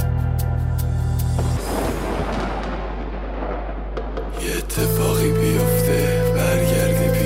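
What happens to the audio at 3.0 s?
At 3.0 s the audio carries mains hum, present there just as it is across the whole clip. A steady 50 Hz tone, with a few low harmonics stacked above it, sits under the sound at a strong level, only a little below the wanted signal. It comes from the power line coupling into the signal path, most plausibly through a ground loop or induction from a nearby transformer, so it stays constant rather than changing with the material.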